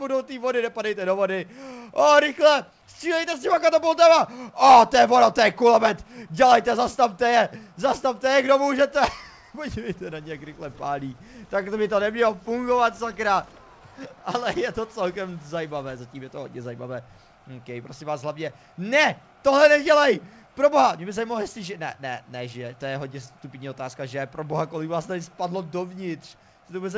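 No faults are audible; the audio has come through a call path whose content stops at 8 kHz, consistent with a wideband codec such as G.722.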